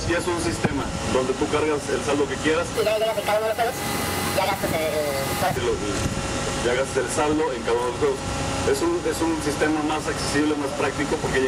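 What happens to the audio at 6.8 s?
Nothing goes wrong at 6.8 s; the audio plays through that point intact, with no dropout, click or other fault.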